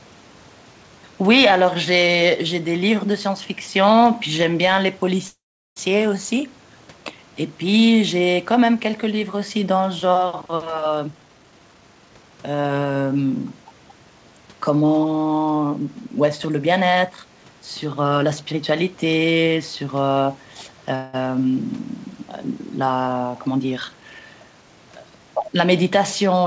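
Speech on a call path whose band stops at 8 kHz, which fits a G.722 codec, with several timing and echo faults. There are two call audio freezes. The first runs from 5.28 to 5.78 s. Sound stalls for about half a second, and the fill decays into silence for 380 ms of it. The second, from 20.95 to 21.15 s, is a shorter stall of about 0.18 s, filled with a fading continuation and no silence. The likely cause is held-up packets draining the jitter buffer. The receiver stretches the last sound until data returns. Playback then resumes where it stopped, so nothing is lost, but the timing shifts later by the gap. Jitter buffer speed-up follows each freeze. From 10.98 to 12.31 s the speech plays at 137 percent speed with unchanged pitch, sounding clearly rushed. About half a second of material is cut out in small pitch-period slices. From 23.48 to 24.77 s the same thing happens more gently, at 114 percent, trimming about a fifth of a second. 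Both are the buffer shedding surplus delay. Near the end, the other side's voice leaks through from 25.35 to 25.46 s. A brief scrap of far-end sound sits about 5 dB below the talker. The likely cause is loudspeaker echo the canceller failed to remove. Right after, speech is suppressed in double talk from 25.48 to 25.55 s. The talker dips by about 5 dB for roughly 50 ms while both ends overlap. The canceller likely attenuates everything when it cannot separate near speech from echo.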